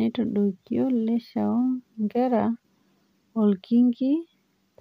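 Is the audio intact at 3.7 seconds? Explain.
Yes, at 3.7 seconds the speech is intact, with no dropout, click, distortion or other fault at that moment.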